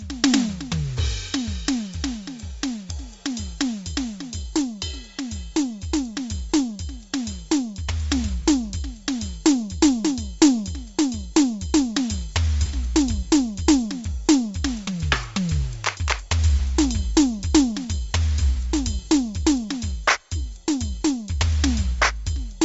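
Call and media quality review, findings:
Throughout: music dull, nothing above 7.7 kHz, grainy breathy edge on tones. Likely Bluetooth LC3 compression: the encoder zeroes much of the upper spectrum and noise-fills it, which fits a low bitrate near 32 kbps.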